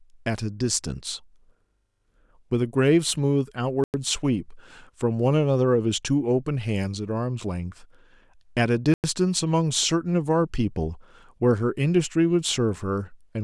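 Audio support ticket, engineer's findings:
Gap between chunks: two 100 ms silent holes at 3.84–3.94 s and 8.94–9.04 s, 5.1 s apart. Probable chunked transport or playback: silence inserted at each join, from codec padding or late chunk start. Speech continues intact after each hole.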